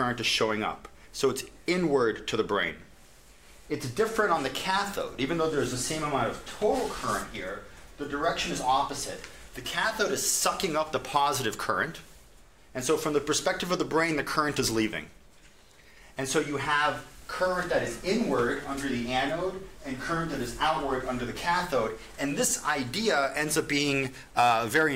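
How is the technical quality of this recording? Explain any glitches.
The technical quality of this recording is sound, with no glitches to explain.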